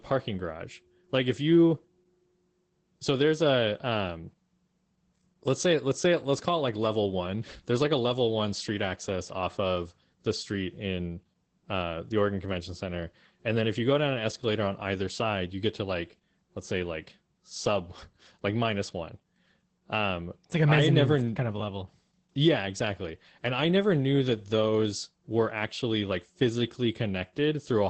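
Opus voice compression runs through the whole of this speech clip, and its damage is plainly audible. The encoder appears to be working in its SILK linear-prediction mode at a low rate, which fits a bitrate around 12 kbps in wideband. Nothing survives above about 8.6 kHz, so the voice sounds muffled, and the coarsely coded excitation gives it a hoarse, slightly robotic edge in every 20 ms frame.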